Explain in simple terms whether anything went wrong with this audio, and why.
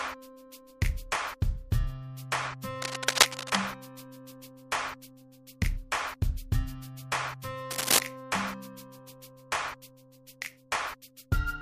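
Cable scratch noise at 2.82 to 3.66 s and 7.70 to 8.00 s: rough scratchy bursts over the sound, likely from a worn cable or connector being moved.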